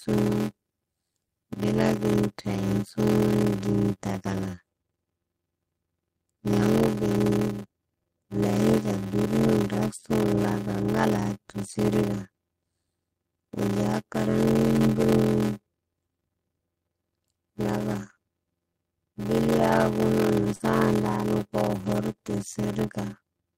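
Throughout the clip, one stage hands on shorter blocks than the next one reads, which fits 512-sample reads filled from 320-sample writes, with the remainder zero-padded. That block size mismatch (padded) leaves a gap in every block, producing a steady 86.1 Hz buzz, while the speech runs at 0.625 times normal speed with its pitch roughly unchanged.

At 20.55 to 20.62 s, about 40 ms of the call arrived too late for the decoder, and the receiver filled 44 ms by extending the preceding sound before blending back. This short concealed packet loss comes through as a brief smear or wobble in the speech.

From 20.60 to 20.62 s, overlapping the end of that loss, a lost packet was rebuilt from error correction. The decoder played 20 ms from the low-bitrate copy carried in the following packet, so that stretch has no gap but sounds rougher and noisier.

At 21.74 to 21.96 s, the same error-correction rebuild happens again, covering 120 ms in total, which points to six separate 20 ms packets. 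Those moments sound coarse and grainy.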